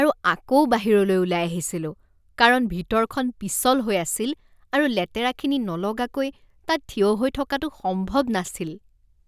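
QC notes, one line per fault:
No fault found.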